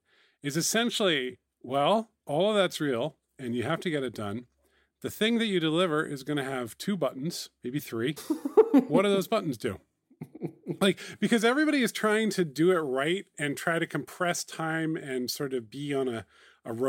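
Listening to the speech recording, nothing technical stood out as a problem at any point.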